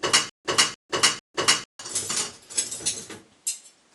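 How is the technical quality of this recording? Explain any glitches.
The recording opens with a stutter with silent gaps, already under way at the start and lasting until 1.79 s: a 295 ms burst of sound repeats three times, each followed by 154 ms of dead silence, every 448 ms. A stalled player or stream likely replayed its last fragment between empty retries, losing the audio in between.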